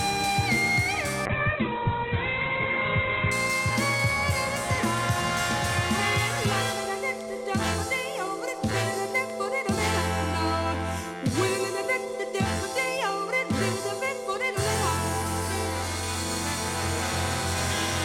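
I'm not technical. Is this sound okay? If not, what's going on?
No. From about 1.27 to 3.39 seconds the sound turns muffled and rough, losing its crisp top end. That's a call bitrate drop: the connection briefly squeezed the audio into far less data, so detail was thrown away until quality recovered.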